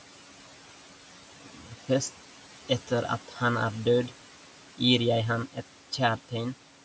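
Noise suppressor artifacts run through the whole of this speech clip. The suppressor pulls down whatever bands it judges to be steady noise by about 11 dB, frame by frame, so the room noise sitting about 19 dB under the speech dips in the pauses and swells back beneath each phrase. The call-style microphone chain's band limit, with nothing above 8 kHz, can be heard alongside this.

Speech cut by the noise suppressor occurs at 1.46 to 1.89 s and again at 3.28 to 3.38 s, just before "han er død". In both places the suppressor mistook quiet parts of the speech for noise and turned them down together with the background, by as much as about 11 dB in the first span and about 7 dB in the second. Roughly a fifth of a second and then a tenth of a second of speech sounds swallowed and faint.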